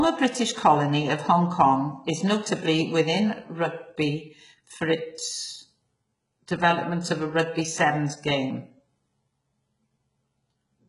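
Throughout, the speech has gritty, synthetic treble stopping near 11.1 kHz and lispy s sounds, likely from heavy HE-AAC compression rebuilding the highs by spectral band replication.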